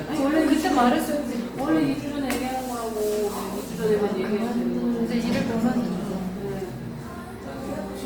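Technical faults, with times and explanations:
Throughout – Opus compression: grainy, rough texture with noise-filled highs, likely from Opus in music mode running short of bits, which fits roughly 24 kbps.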